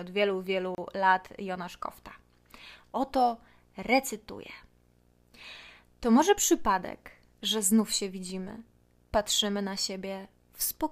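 From the first moment to the end, the speech carries a video or display buzz: a screen or video cable is coupling into the audio path, adding a 60 Hz buzz at the picture's field rate with a gritty hash riding above it, roughly 35 dB below the speech. On a spectrogram it shows as a steady horizontal line at 60 Hz with a ladder of harmonics and faint broadband smear continuing through pauses; the waveform's silent stretches never settle to a flat line.

At 0.75 s, right after "od wielu", a gap at a join of encoded pieces cuts in. The audio was encoded in separate pieces and joined without trimming, so the encoder's start-up delay and last-frame padding leave a silence of about 31 ms, ending at 0.78 s. It sounds like a brief dropout before the speech resumes exactly where it stopped. The waveform shows a near-flat notch with steep, slightly smeared edges, and the spectrogram shows a narrow vertical blank band across all frequencies.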